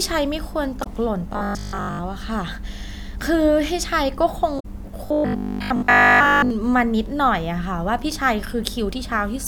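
In this speech clip, damaged data in the compressed stream makes the decoder misread frames, lose sync and hunt for the next frame header at 0.80 to 0.87 s and 4.56 to 4.66 s, heard as brief blips. From 1.33 to 2.03 s and 5.06 to 6.50 s the speech turns into a rigid, metallic buzz at 50 Hz that still loosely tracks the talking. This is likely robotic sound from repeated short buffers, with starved playback looping roughly 20 ms chunks in place of most of the real audio.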